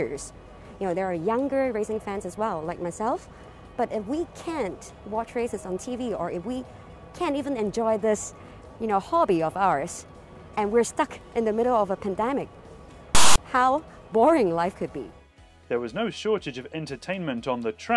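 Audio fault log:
13.15–13.38 s, file tags played as audio: a hard-edged, lopsided rasp, then dead silence, as tag text and its zero padding are decoded as samples.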